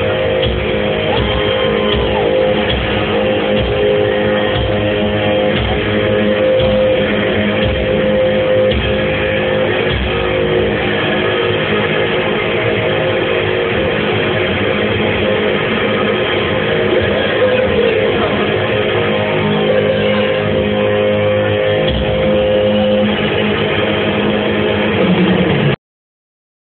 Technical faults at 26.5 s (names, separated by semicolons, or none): cut-off end